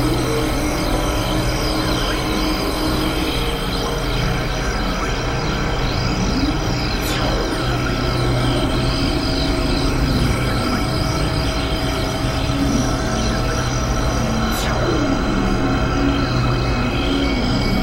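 There are two loud pops, one at 2.81 to 2.83 s and another at 7.26 to 7.28 s. Each is a single sharp click standing a few dB above the sound, which carries straight on underneath. That's likely a voltage spike from a switch, plug or static getting into the chain.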